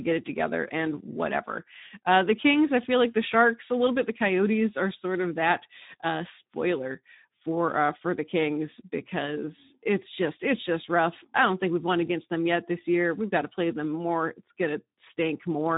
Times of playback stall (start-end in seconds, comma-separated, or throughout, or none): none